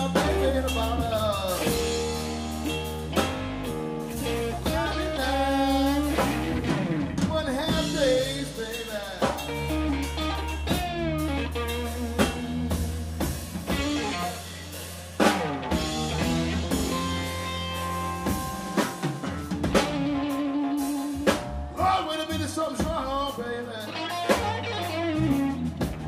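No technical fault can be heard anywhere in the audio, and the signal holds steady from its opening moment to its final one.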